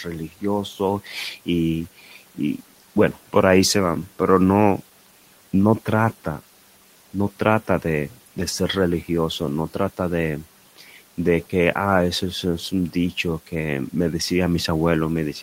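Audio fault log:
1.99–2.17 s speech cut by the noise suppressor: the suppressor mistook quiet speech for noise, pulling about a tenth of a second down by about 8 dB so it sounds swallowed; the waveform envelope briefly notches and the spectrogram thins.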